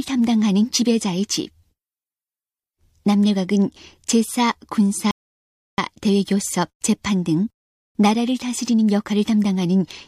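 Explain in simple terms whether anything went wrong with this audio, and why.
At 5.11 seconds the sound suddenly drops into silence, and at 5.78 seconds it picks up again exactly where it left off, with nothing skipped. That gap is a rebuffering stall. The player used up all the audio it had downloaded ahead of time and had to wait, silent, for more to arrive before continuing. No sound is lost; the clip simply gains about two-thirds of a second of dead air.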